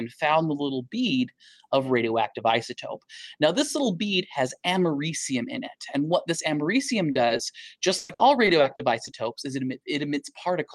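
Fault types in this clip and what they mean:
Short concealed packet loss: bits of the stream arrived too late for the decoder, so the receiver papered over them by extending the last bit of sound and then crossfading back into the real signal. Here it happens in a quick cluster just after 7 s: a 40 ms patch at 7.11 s, then 20 ms ones at 7.27 and 7.37 s. Each comes across as a tiny smear or wobble.
Repeated packet loss (robotic sound): from 7.97 to 9.09 s the losses keep coming, six gaps in about a second, adding up to 280 ms of made-up audio, roughly a quarter of that stretch. The longest hole is 120 ms. Because each patch barely finishes before the next one starts, the sound goes choppy with audible chunks missing, all sitting on top of an Opus call path whose top end stops around 12 kHz.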